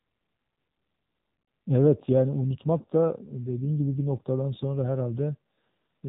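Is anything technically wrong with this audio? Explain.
Yes. Throughout the speech, the AMR narrowband mobile codec has plainly audible damage. Nothing passes above about 3.8 kHz, so the sound is thin and telephone-like. AMR-NB samples at 8 kHz and rebuilds the voice from a vocal-tract model driven by a few pulses per 5 ms subframe. At a low rate, which fits the 7.4 kbps mode, that sparse excitation gives a buzzy, synthetic texture to the speech.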